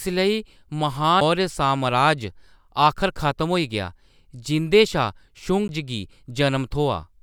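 CD skips at 1.20 s, just before "मौर्य सामराज", and at 5.68 s: the pickup laser jumped to another turn of the disc's spiral, so the player muted only a few milliseconds, then about 10 ms, leaving a tick before the speech resumes from a different point.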